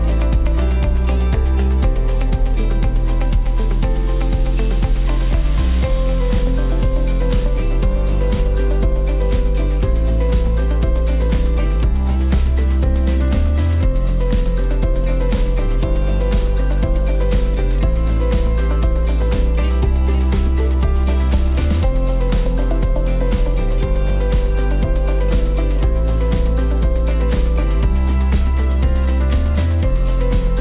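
Aliasing runs throughout: content above a 4 kHz fold point, consistent with resampling to 8 kHz without filtering, returns as gritty, metallic tones roughly 30 dB down.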